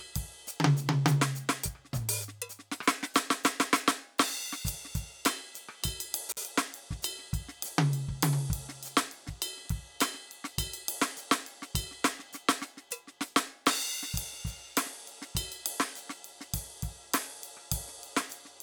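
A music clip with two faults worth flagging. Around 6.30 to 6.37 s there's an intermittent contact: a loose plug or cable briefly opens, so the music drops out for about 47 ms, with crackle at both edges and faint hiss in the gap. Then at 15.90 s you get one sharp, isolated click, most likely dropped samples, with just a handful missing, well under a tenth of a millisecond, so the waveform jumps but no music actually disappears.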